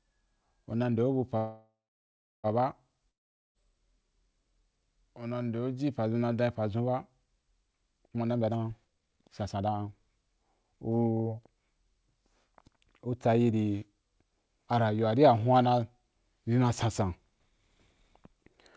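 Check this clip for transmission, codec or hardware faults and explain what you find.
Three faults are audible in this speech clip: a call audio freeze, a long network dropout and a stretch of jitter buffer speed-up. The call path's 8 kHz ceiling, which fits G.722 at 64 kbps, also shows as an empty band across the whole spectrogram.

Call audio freeze, 1.37 to 2.47 s, right after "nde o bu pa". The likely cause is packets held up in transit so the jitter buffer ran dry. The last sound is stretched into a fading buzz, then about 0.69 s of silence. Speech resumes where it stopped, nothing lost, about 1.07 s later. On a spectrogram, smeared harmonics decay into a blank gap.

Long network dropout, 3.10 to 3.58 s. Here the audio likely never arrived, so roughly 0.45 s of speech is simply gone. A brief buzz from the last sound fades within about a hundredth of a second, followed by about 0.44 s of silence, and the speech picks up further on. 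The waveform goes flat and then resumes with a jump in content.

Jitter buffer speed-up, 8.08 to 11.21 s. Too much audio had built up in the buffer, so the receiver repeatedly cut out short pitch-period slices to shrink the delay. About a second was removed, and speech plays at 134% speed with unchanged pitch and sounds hurried. Syllables look compressed in time on the spectrogram.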